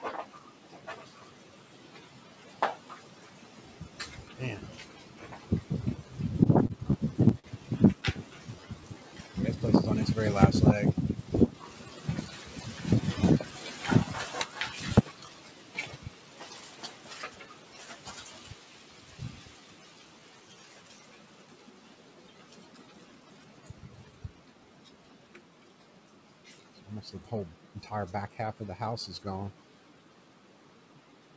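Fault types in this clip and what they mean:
noise suppressor applied to music or sounds: A suppressor tuned for speech stayed active across the whole clip. It treats sustained tones, ambience and reverb as noise and pulls them down. Onsets pass through, but held parts and decays sink. The level swings by roughly 10 dB, so the sound pumps and thins as the suppressor grabs and releases. Tails are cut short instead of fading naturally.
repeated stalls (stutter): Between 6.44 and 8.04 s the playback stalls again and again. Packets came in late, so the receiver's buffer ran dry eight times. Each time it held the last sound going until new audio arrived. The longest hold is about 44 ms, and the fills add up to about 139 ms. Nothing is lost. The passage drags and catches in a jerky rhythm.
jitter buffer slow-down: Twice the buffer stretched the audio to build up a reserve. It repeated single pitch periods or slices of quiet many times over. 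The pitch stays put but the tempo drops. From 8.46 to 9.04 s it runs at 89% speed, adding 74 ms. From 19.60 to 20.84 s it runs at 95%, adding 78 ms. Sounds feel drawn out.
jitter buffer speed-up: Twice the buffer held too much audio and trimmed it to cut delay. It dropped short pieces of one or a few pitch periods in quick succession. From 11.15 to 12.29 s the audio runs at 106%, losing roughly 70 ms. From 22.87 to 24.13 s it runs at 107%, losing about 100 ms. The pitch holds, but the sound feels hurried and the tempo wavers.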